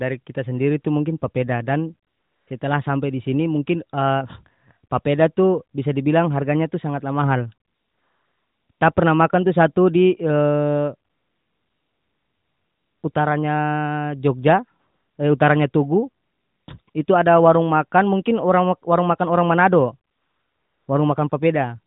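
AMR comfort noise replaces the real background in pauses from 2.1 s to 21.3 s, longest at 11.10–13.04 s. The transmitter stopped sending speech frames, so the gaps fill with smooth synthetic hiss, which shows on a spectrogram as flat, featureless blocks below 4 kHz that switch abruptly on and off.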